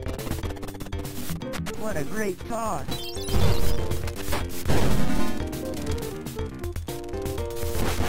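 Nothing goes wrong anywhere in this audio; there's no glitch, dropout or distortion to point to at any moment.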